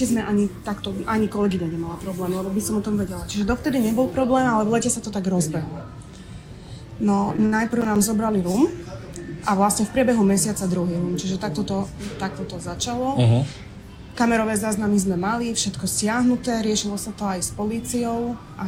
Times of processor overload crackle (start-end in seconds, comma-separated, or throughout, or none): 7.72-7.96